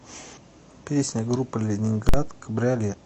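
Right near the start, from about 0.33 to 0.38 s, there's a short squawk where the compressed stream has damaged data. A chunk of the encoded bytes was corrupted, so the decoder misread those frames, lost its place, and hunted for the next valid frame header. You hear a brief chirpy blip. The same thing happens again at the very end, around 2.88 to 2.95 s: another quick glitch with the same cause.

In between, at 2.09 s, there's a hard bang that lasts about 46 ms, to roughly 2.14 s. That's invalid numbers at full scale. Something in the processing produced infinite or otherwise invalid values, and they got clamped to the largest positive or negative value for that whole block. The length fits a 2048-sample block. With a block that short, the pop at the start and the pop at the end merge into one loud crack, and none of the speech gets through for that stretch.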